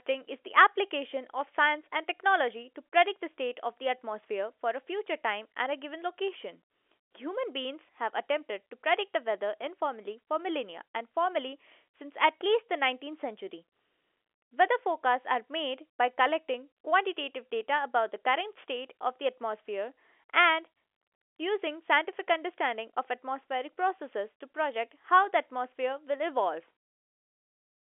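A speech recording carried over a telephone line, with nothing technically wrong in it.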